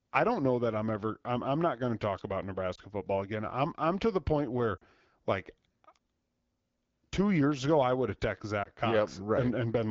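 At 2.75 s, after "going to talk about", there are lost AMR speech frames. The sound dips and warbles briefly before "football again I'm I'm". The decoder lacked about 20 ms of valid data, so it reused the last good pitch and vocal tract settings at reduced gain. At 4.77 s, after "to the point where", a longer gap of about 40 ms drops the sound to near silence. At 8.63 s, after "I would have texted", a short warble recurs. The wideband coding stays clear, though the voice returns weak or rough for a moment after each gap.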